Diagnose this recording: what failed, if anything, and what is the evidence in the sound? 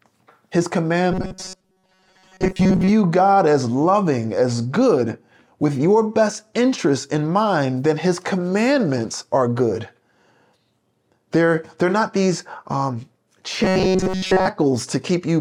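Robotic sound from repeated short buffers, likely a driver buffer underrun: at 1.12–2.89 s and 13.64–14.48 s, speech becomes a metallic 188 Hz buzz, fitting roughly 5 ms repeats.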